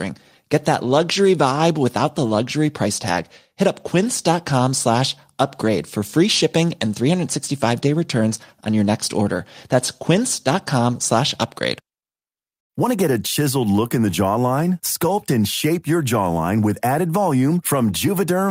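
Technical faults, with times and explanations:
No technical faults can be heard anywhere in the recording, and the signal keeps a steady, intact level with no breaks or disturbances.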